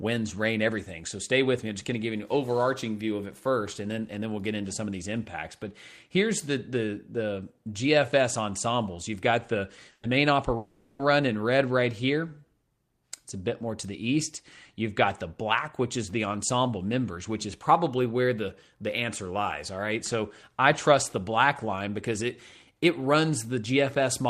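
At 9.91 s a burst of packet loss leaves a gap of about 120 ms, filled by the preceding sound fading out, then a brief 10 ms silence before resuming. From 10.57 to 11.02 s the sound is stretched into a fading 420 ms fill with no silence, far longer than the burst and likely a long network dropout.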